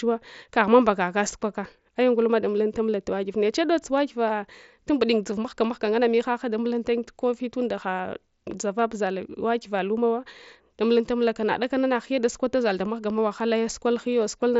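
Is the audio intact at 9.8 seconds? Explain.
Yes, the speech at 9.8 s is intact, passing normally through the Bluetooth mSBC headset codec, which leaves nothing above about 7.7 kHz.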